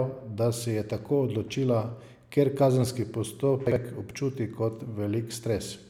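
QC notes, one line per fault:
3.67–3.76 s, chunks out of order: two adjacent 46 ms pieces play swapped just before "občuti kot", so the speech jumbles briefly. The three hard joins show as vertical lines on a spectrogram and waveform steps, with nothing lost.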